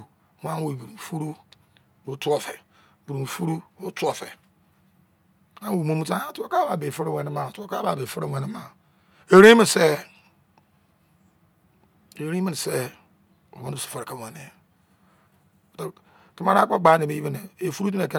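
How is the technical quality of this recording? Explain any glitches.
Nothing in the recording stood out as a technical problem on listening, so there are no glitches to explain.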